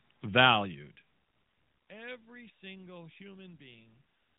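No technical faults can be heard anywhere in this speech clip.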